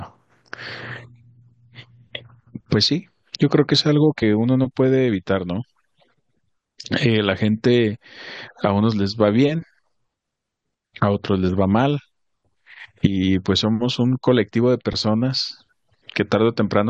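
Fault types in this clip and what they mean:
Damaged data in a compressed stream: a brief blip in the speech at 4.22 s, where corrupted bytes made the decoder misread frames, lose sync and hunt for the next header.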